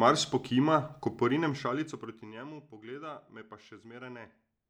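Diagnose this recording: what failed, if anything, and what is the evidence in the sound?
Gain applied per buffer without smoothing stepped the level 1 dB at a time, ten steps per second: zipper noise ticks from 1.21 to 2.51 s as the sound drops around 20 dB.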